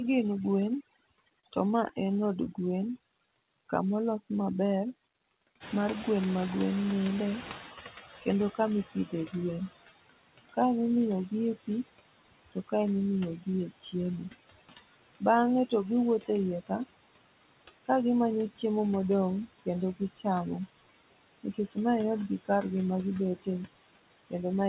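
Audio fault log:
Throughout: overdone noise removal. The reduction is set far too hard, so bands near the noise estimate are driven almost to nothing, taking quiet parts of the speech along and leaving a lowered background flecked with twinkling specks.
Throughout: noise suppressor artifacts. Bands judged to be steady noise are pulled down frame by frame, by about 19 dB, so the noise sinks between words and swells back under them.
1.19 to 3.55 s: jitter buffer slow-down. Between "gin gwen" and "kamolos maber" the receiver repeats single pitch periods to rebuild its reserve, adding 103 ms and running at 96% speed, so sounds stretch out at unchanged pitch.
1.41 to 2.48 s: scattered short gaps. About five small holes, the longest around 30 ms and roughly 70 ms in total, are patched by extending the preceding sound, which leaves the speech clear apart from brief ticks, smears and hiccups across this stretch.
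5.60 to 8.12 s: noise suppressor catching up. The room noise jumps by about 16 dB near 5.5 s and the suppressor's estimate lags, so the louder noise passes through with less reduction at first, then sinks over 2.55 s to about 12 dB of cut.
8.10 to 9.34 s, 10.45 to 18.64 s, 19.61 to 20.26 s, 21.44 to 24.68 s: speech cut by the noise suppressor. Soft consonants, word endings and quiet stretches are mistaken for noise and turned down with it, by up to about 20 dB, so they sound swallowed or faint, with the 10.45 to 18.64 s stretch hit hardest.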